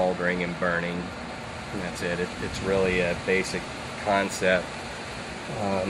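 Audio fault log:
Throughout: MP2 compression. The sound is dull, with a gurgling, granular roughness. Upper sub-bands drop in and out, and the remaining bands are coarsely quantised. This likely comes from MPEG Layer II coding at a low rate, which fits about 80 kbps.
3.60 to 3.70 s: DAB burbling. A brief burst of burbling sits over the audio. Bit errors slipped past error correction into six coded frames. Corrupted samples put short blips of noise into individual sub-bands.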